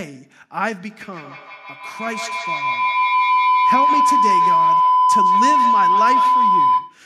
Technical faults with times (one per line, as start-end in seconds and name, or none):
0.90-7.05 feedback howl